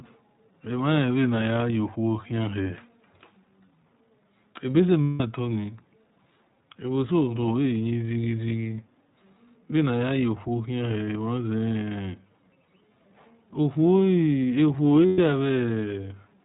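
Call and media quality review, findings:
Throughout: speech band-limited with nothing above 4 kHz, plainly rough and slightly synthetic. Cause: iLBC codec, narrowband, each 20 ms frame's excitation coded on its own. The texture points to the 15.2 kbps mode.

Lost iLBC frames at 5.04–5.22 s (180 ms), 12.64–12.69 s (40 ms) and 15.06–15.19 s (120 ms): held, buzzy, breathy vowel. The decoder repeats the last pitch cycle mixed with noise and fades it over the longer gaps. Speech recovers almost immediately.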